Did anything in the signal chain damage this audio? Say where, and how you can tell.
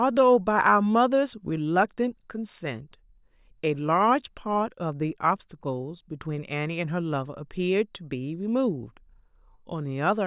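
No, nothing audible in this speech recording points to damage at any stage of the signal chain.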